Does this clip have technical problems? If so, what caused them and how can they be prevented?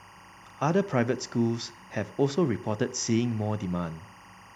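Yes: timecode bleed runs throughout, a chirping warble near 1 and 2 kHz, roughly 25 dB below the speech, from 23.976 fps linear timecode leaking across. Prevent it by routing timecode on separate, shielded cables away from audio lines.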